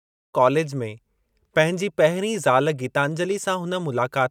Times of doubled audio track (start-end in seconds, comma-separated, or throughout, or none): none